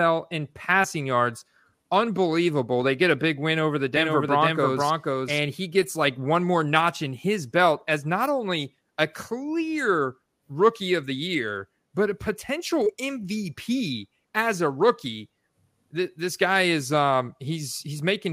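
From 3.97 s to 5.39 s the speech carries a doubled audio track: a second, full-band copy of the same material runs roughly half a second behind the original and about 5 dB quieter. It has no decay or room colour, so it reads as a flat echo, and it cuts in and out abruptly at both ends. The likely cause is the signal being captured twice, once through a slower path.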